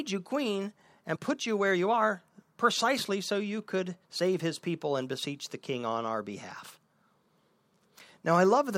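Compressed frames skipped at 1.15 to 1.17 s, between "you queen" and "put you where you": about two frames of roughly 21.3 ms each never reached playback, so the speech leaps ahead by about 40 ms, heard as a sudden jump at the join.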